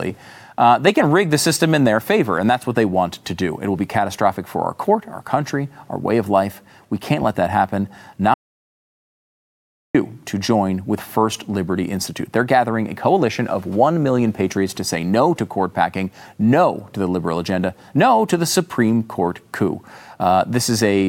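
At 8.34 s, after "can't let that happen", an audio dropout to silence lasts 1.6 s, likely a lost input. It returns on "to join with", and unlike a quiet pause, even room tone vanishes.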